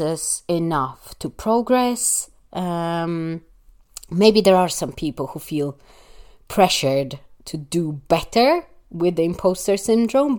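No technical faults are audible.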